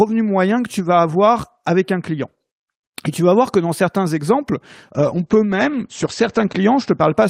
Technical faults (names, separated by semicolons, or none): call bitrate drop